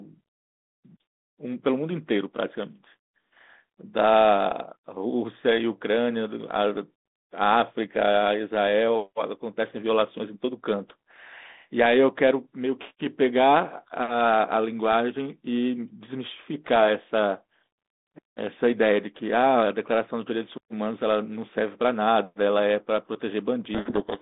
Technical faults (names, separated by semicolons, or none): codec payload misread